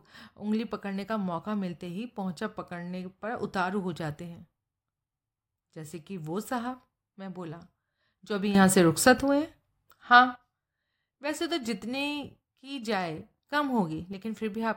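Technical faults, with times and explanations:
8.55–10.36 s and 13.52–14.13 s, sudden gain jump: the speech and its background noise both leap up together, by about 11 dB and then about 6 dB, and drop back at the end of each span. This is likely a digital gain change applied instantly, without a ramp.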